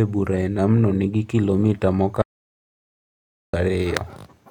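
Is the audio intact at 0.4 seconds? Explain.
Yes, the speech at 0.4 seconds plays through cleanly, with no dropout, click, distortion or other fault at that moment.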